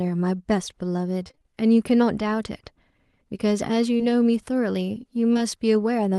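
From 1.23 to 1.54 s the audio breaks up with repeated packet loss, heard as a robotic sound. Six separate gaps fall in that third of a second, none longer than 20 ms. Each one is bridged by extending the preceding sound before the next gap arrives, so nearly half the span is synthesized rather than received. The result is a choppy, robotic texture with small pieces of the speech missing.

Two isolated instances of short concealed packet loss follow, at 3.97 to 4.01 s and at 5.33 to 5.37 s. In each case about 20 ms of audio failed to reach the decoder in time. The receiver filled the hole by carrying the last sound forward and then blending back into the real signal. Each event is heard as a brief smear or wobble in the speech.

The call path itself is audible as a band limit near 12 kHz along with ordinary coding noise, which fits Opus at roughly 24 kbps.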